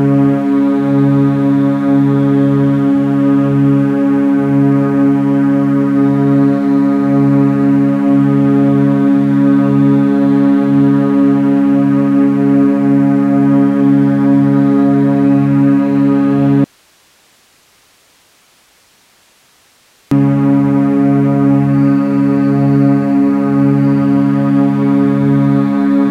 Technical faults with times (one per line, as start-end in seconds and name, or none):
16.64-20.11 audio dropout to a faint residue